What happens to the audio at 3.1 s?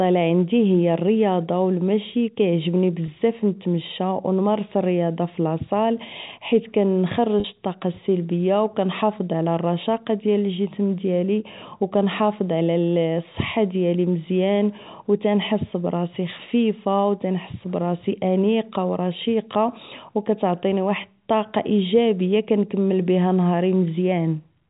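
At about 3.06 to 3.08 s there is a brief packet loss with pitch repetition: roughly 20 ms of speech is missing, which fits a single lost packet. The receiver fills the gap by repeating the last pitch period, so the sound briefly holds on a slightly buzzy, static tone before speech resumes. On a waveform, identical cycles repeat across that span; a spectrogram shows frozen harmonic lines. The G.711 telephone band limit at 4 kHz stays in place.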